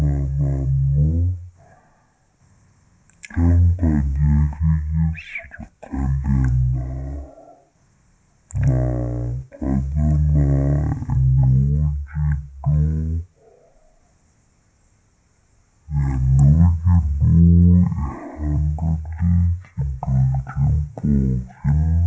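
From the very start and all the way through, the speech has a wrong sample rate: it runs at about 0.36 times normal speed and sits 17.6 semitones low, which fits 44.1 kHz audio being played back at 16 kHz with no conversion. Everything comes out slow and sludgy.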